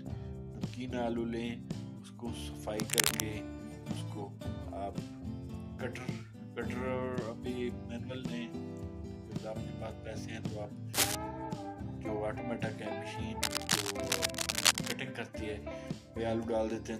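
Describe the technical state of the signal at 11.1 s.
A brief burst of scratching, rustling noise sits about 5 dB above the sound from 10.94 to 11.15 s: cable scratch noise, likely from a worn cable or connector being moved.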